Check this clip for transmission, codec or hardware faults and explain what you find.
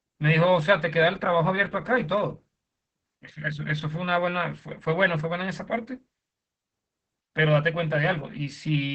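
One codec fault runs through the entire speech clip: heavy Opus voice compression. The SILK linear-prediction coder limits the band to about 8 kHz and quantises the excitation coarsely, which fits a bitrate near 10 kbps. The voice sounds muffled, hoarse and slightly robotic from start to finish.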